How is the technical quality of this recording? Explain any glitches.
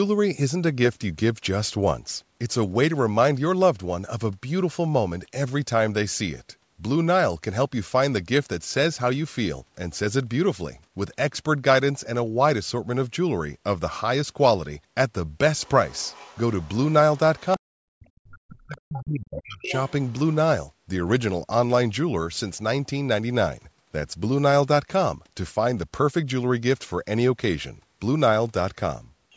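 Between about 15.6 and 20.1 s the speech has two linked call-audio problems: a second voice bleeds in underneath, and the main talker is pushed down while that other voice is present. The band stops at about 8 kHz, which fits call microphone processing.

Other side's voice leaking through: scraps of a second voice appear at 15.62–15.69, 15.89–16.38, 16.61–16.69, 17.14–17.19, 18.95–18.99, 19.35–19.42 and 19.62–20.13 s. The early ones sit far below the speech, about 25 to 40 dB down. The last three are louder, only about 15 dB down. This is likely loudspeaker playback reaching the microphone after the echo canceller missed part of it.

Speech suppressed in double talk: from 17.56 to 19.72 s the talker's level sags and breaks up for roughly two seconds in total, at worst dropping by around 40 dB, so stretches nearly vanish. The likely cause is that, with both sides talking at once, the echo canceller could not separate the talker from the echo and attenuated everything.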